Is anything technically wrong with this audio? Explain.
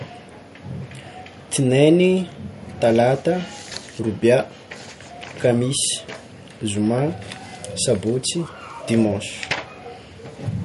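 Yes. Throughout the speech there is MP3 compression damage, likely from an encoder starved for bits. The damage points to a low bitrate, around 48 kbps. With too few bits, the encoder drops all treble above 11.2 kHz and zeroes weak frequency lines, which flicker on and off between frames. The result is plainly audible: a dull top end, a watery, swirling texture, metallic chirps on s sounds, and softened, smeared consonant attacks.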